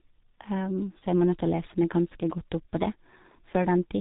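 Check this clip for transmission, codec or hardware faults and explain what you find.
One codec fault runs through the whole clip. The speech has passed through a G.723.1 codec, and the damage is heavy and present throughout. The codec models the voice in 30 ms frames at a very low bitrate, consistent with its 6.3 kbit/s mode. Everything above about 3.8 kHz is gone, so the speech sounds muffled. The slowly updated voice model smears rapid changes, which makes consonants blur together and leaves a rough, hoarse texture on voiced sounds.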